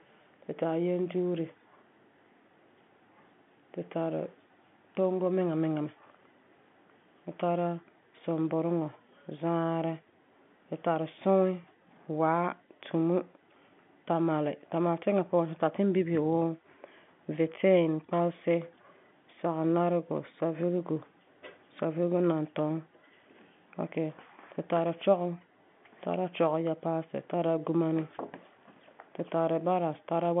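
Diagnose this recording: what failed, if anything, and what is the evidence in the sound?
Nothing failed; this telephone-band speech shows no faults.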